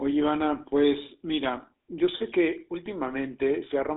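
GSM full-rate codec coding runs through the whole clip. The speech is rebuilt from a vocal-tract model excited by regularly spaced pulses, giving a plainly audible buzzy, gravelly roughness, consistent with about 13 kbps, and a band of 250 Hz to 3.7 kHz, with nothing above 3.8 kHz.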